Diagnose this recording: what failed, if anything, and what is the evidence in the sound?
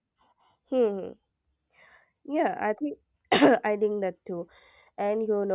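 Nothing failed: no stage from capture to playback leaves an audible trace in this speech recording.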